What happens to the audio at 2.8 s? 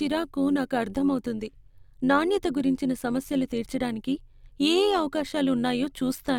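At 2.8 s the speech carries overlap-add ripple, present across the whole clip. Frames were rejoined with overlapping windows that don't sum evenly, so the level dips by about 6 dB around 100 times a second. Unlike a slow tremolo, it sounds like a metallic buzz with extra tones around each note.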